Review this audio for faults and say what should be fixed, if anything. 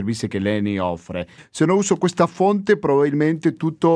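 Nothing needs fixing: the speech signal holds steady throughout, with no audible technical faults at any point.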